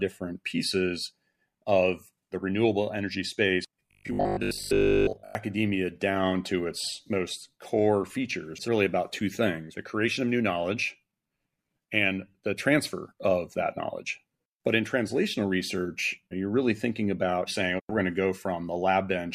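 From 3.87 s to 5.35 s the speech turns into robotic sound from repeated short buffers: a rigid, metallic buzz locked at 50 Hz that still loosely tracks the syllables. The likely cause is audio arriving too seldom, so the playback side fills the gaps by looping the last chunk, which at 50 Hz fits a 20 ms buffer. Most of that stretch is repeated material, with the genuine audio in between skipped.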